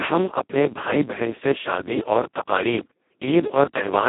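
Speex codec damage is present throughout, and sounds like a setting near 2 kbps: with too few excitation bits, speech turns hoarse and robotic within 150 Hz–3.5 kHz.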